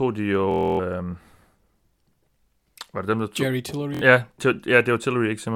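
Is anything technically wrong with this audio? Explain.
Yes. There is Bluetooth stutter from 0.51 to 0.79 s and from 3.95 to 4.02 s. Packets arrived late or not at all, so the receiver kept replaying its last short buffer, giving a rapid machine-gun buzz. The speech then resumes further on, skipping about 0.28 s and 70 ms respectively.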